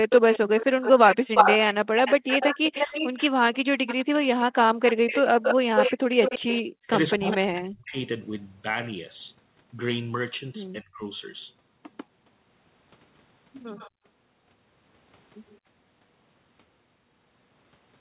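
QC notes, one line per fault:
0.09–7.36 s, echo leak: a delayed copy of the speech follows the direct sound by 350 ms and sits only a few dB below it, so it is heard as a distinct repeat rather than as room reverberation. The other side was likely playing the call on a loudspeaker, and its echo canceller did not remove what its microphone picked up, so the leftover was sent back down the line.
7.94–8.01 s, 13.76–13.90 s and 15.49–15.58 s, echo leak: brief, faint scraps of delayed speech. The delay is 199 ms at 7.94 s and 115 ms in the later two. The level is about 25 dB below the speech at 13.76 s and roughly 35 dB below at the other two points. The likely cause is the echo canceller not removing all of the loudspeaker signal, which let fragments of it back through.
5.70–5.75 s, 6.44–7.95 s and 10.81–11.02 s, speech suppressed in double talk: the talker's level collapses in short bursts. 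It drops by as much as 40 dB in the first two spans and by around 20 dB in the third, and the long middle span affects roughly 700 ms of sound. Both sides were likely talking at once, and the echo canceller, unable to separate near speech from echo, turned both down.
6.03–6.16 s, background gated by the echo canceller: the room sound drops by about 40 dB for roughly 150 ms and then returns. The canceller clamped the microphone hard while the loudspeaker was playing, which removed the background as well, and the sound came back when it let go.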